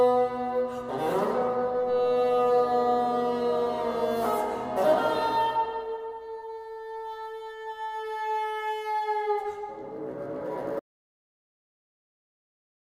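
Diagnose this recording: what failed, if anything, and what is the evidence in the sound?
Audio dropout to silence from 10.80 s to the end: sound cuts off into silence with no room tone, likely from a lost input device or link.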